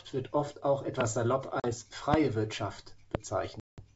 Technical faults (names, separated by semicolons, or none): loud pop; packet loss on an ADPCM call